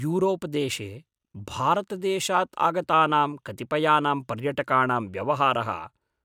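Listening to this speech recording, nothing stood out as a technical problem.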